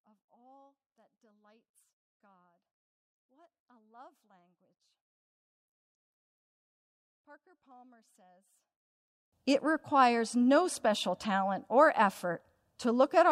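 From the start to 9.32 s, the speech is almost gone when heard in mono, roughly 32 dB down, leaving only a faint residue where the centred voice should be. The likely cause is one channel inverted: one side of the stereo pair has reversed polarity, so the voice, which is nearly identical in both channels, cancels itself when they are summed, and only their small differences remain audible.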